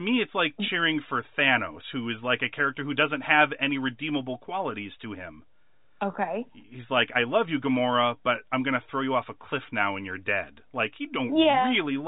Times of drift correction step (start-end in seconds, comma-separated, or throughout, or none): none